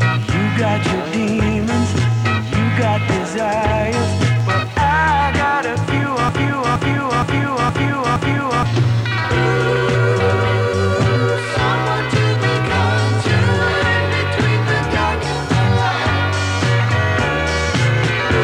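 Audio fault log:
6.29–8.65 s: broken-record loop. A 0.47 s fragment plays five times back to back, identical each time, so the sound stutters in place. The likely cause is a player or stream stalling and resending its last buffer. The audio meant for that stretch is lost.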